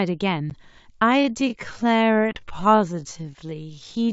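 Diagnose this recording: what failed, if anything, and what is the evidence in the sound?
Two network dropouts hit this speech, at 0.5 s and from 2.33 to 2.39 s. That's packet loss on an ADPCM call: about 10 ms missing in the first, likely a single packet, and 20 ms in the second, a couple of packets. Each gap is a hard-edged silence, and the sound comes back slightly distorted for a few tens of milliseconds. The receiver's adaptive predictor and step size lost track of the sender's and take a moment to resync. The G.722 wideband coding itself is clean at 64 kbit/s.

From 1.13 s to the end there's a time-stretched section. The pace drops abruptly to about 0.575 times normal speed, but the pitch doesn't move, and that stretch drags. The likely cause is processing software fitting the audio to a set length, keeping pitch steady by repeating short slices.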